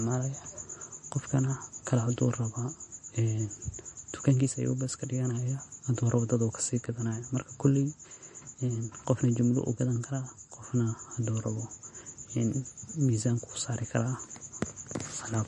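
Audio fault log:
Throughout: MP3 compression, likely, as nothing remains above 10.6 kHz and a plainly audible watery swirl comes from weak frequency lines flickering on and off between frames, which fits a starved bitrate near 40 kbps. A plain low-pass filter would dull the top without any swirl.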